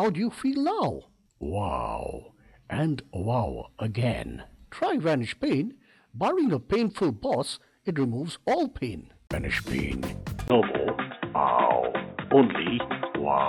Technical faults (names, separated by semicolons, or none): input switched to a poorer device